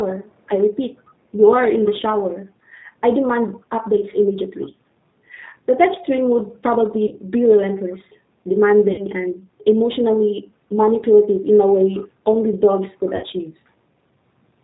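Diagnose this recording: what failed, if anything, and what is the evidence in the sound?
The codec stage is the culprit throughout: the speech has that slightly rough, synthetic edge and nothing above 4 kHz, which points to G.729 at around 8 kbit/s. It rebuilds the voice from a vocal tract filter, a pitch predictor and a few pulses, so the damage is plainly audible.

There's also VoIP packet loss concealed by the speech codec at 7.07 to 7.17 s, 8.92 to 9.06 s and 13.16 to 13.26 s. Roughly 40, 60 and 60 ms went missing, which fits a few 20 ms packets each. The decoder extrapolated from its last pitch and filter with falling gain, and the voice stays weak briefly afterwards.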